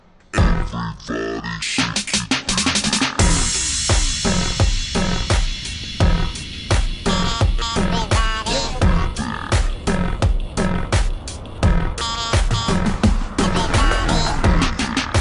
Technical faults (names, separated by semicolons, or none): wrong sample rate